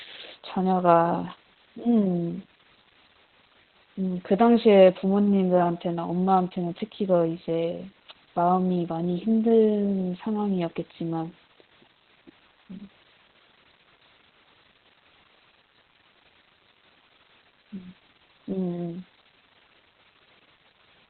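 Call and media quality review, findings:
Low bit depth with dither: steady, even broadband hiss for the whole clip, about 25 dB below the speech, with no added distortion. Probable component: requantisation stage, consistent with 8-bit output. Dither before rounding turns the coarse rounding error into flat white noise. Spectrogram: uniform grey floor across the whole passband, unbroken through pauses. Waveform: fuzzy baseline of constant thickness where silence should be flat.

Opus voice compression: speech muffled, hoarse and slightly robotic throughout, consistent with heavy codec damage. Probable component: Opus encoder in SILK mode at a very low bitrate, around 8 kbps, running narrowband. The linear-prediction coder drops the band and codes the excitation coarsely. Spectrogram: hard ceiling with nothing above 4.3 kHz, smeared harmonics and blocky texture at a 20 ms frame rhythm. Waveform: envelope intact, fine detail simplified.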